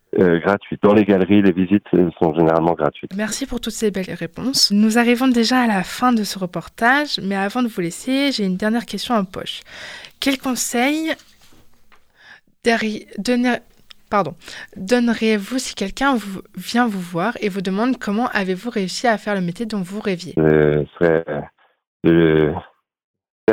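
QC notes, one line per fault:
Throughout: block size mismatch (truncated). A steady buzz at 43.1 Hz sits under the sound for the whole clip. One stage passes on longer blocks than the next stage takes in, so the tail of every block is dropped. Each cut leaves a small jump in the waveform, and those jumps repeat at the block rate. The rate fits a 1024-sample block. The audio plays at normal speed (1.0x) and normal pitch.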